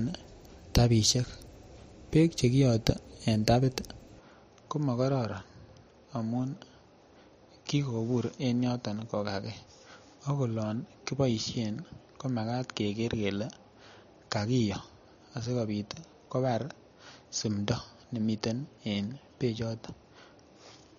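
From 4.2 s, just after "beek chekiyote en tapit", the speech abruptly turns duller and a little quieter through to the end, with nothing above 6.9 kHz and a faint new background noise, but no gap at the change. The likely cause is an input switched to a poorer device.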